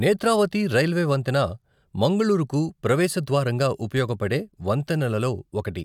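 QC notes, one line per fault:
No technical faults were found; the speech signal has nothing intruding on it at any point.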